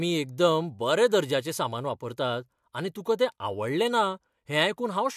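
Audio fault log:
No faults are audible anywhere in this speech.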